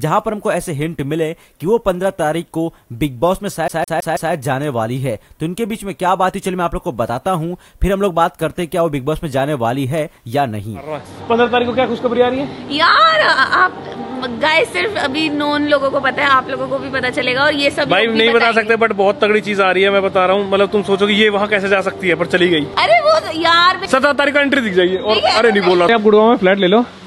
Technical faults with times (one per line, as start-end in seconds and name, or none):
3.68-4.33 CD stuck on one turn